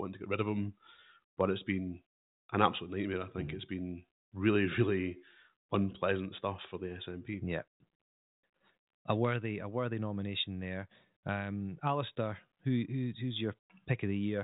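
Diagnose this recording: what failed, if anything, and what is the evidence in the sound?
Nothing in the recording points to a failure at any stage. The speech has passed through G.726 ADPCM coding at 40 kbit/s, which leaves its mark as a telephone band with nothing above about 3.8 kHz and at most a faint trace of coding roughness.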